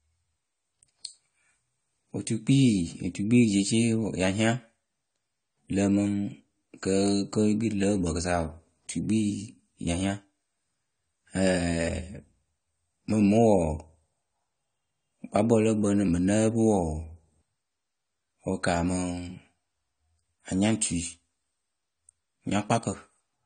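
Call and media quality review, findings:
Throughout: speech dull and smeared, nothing above 9 kHz; likely AAC compression (AAC-LC), consistent with about 32 kbps. Smearing, not just the cut-off, separates it from a plain low-pass filter.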